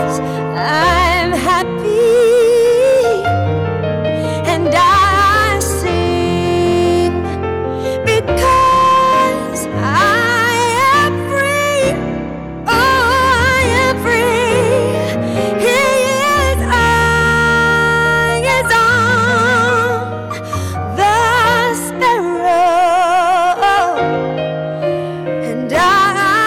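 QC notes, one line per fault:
Throughout, hard clipping: the signal is driven about 9 dB past what the stage can pass, so every peak is sliced flat, and around a tenth of the samples sit pinned at the ceiling. Those squared-off tops spray harmonics high into the spectrum, giving a harsh fuzz on each loud moment rather than occasional crackle. Unlike soft saturation, the onset is abrupt and gritty, not a gradual warm thickening. It follows level, not pitch, which separates it from codec artefacts.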